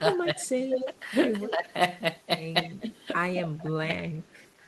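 A short speech recording with two intertwined call-path problems. From 0.0 to 0.9 s, 1.5 to 1.72 s and 3.34 to 3.96 s the voice dips by roughly 10 to 20 dB, deepest in the last stretch. That's speech suppressed in double talk, likely the echo canceller ducking the near talker while the far end was also speaking. There's also echo leak, a copy of the voice trailing about 180 ms behind at 0.41 to 0.99 s (nearly as loud as the original), 1.41 to 1.51 s (noticeably quieter), and 4.22 to 4.5 s (barely there). That's likely loudspeaker pickup the loudspeaker side's canceller didn't fully remove.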